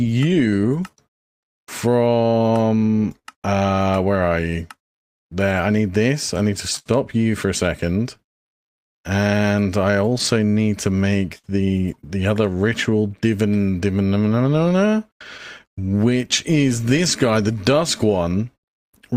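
Clock drift between sender and receiver runs through the whole recording. The sender's clock is roughly 5 percent slow relative to the receiver's, so the jitter buffer keeps draining and the receiver must keep stretching the audio to avoid running dry.

Repeated timing corrections from 0.10 to 18.30 s are the receiver's response. It repeats short pieces, all in the same direction and unevenly spaced, slowing playback to 98 percent and adding a few hundred milliseconds overall. The result is an unsteady tempo with faint hiccups.

Scattered short gaps occur from 0.18 to 3.27 s (about five), from 5.19 to 11.46 s (about seven, the longest around 70 ms), and from 14.58 to 18.65 s (about ten). Late packets left small holes that were patched by continuing the preceding sound, causing brief smears and ticks.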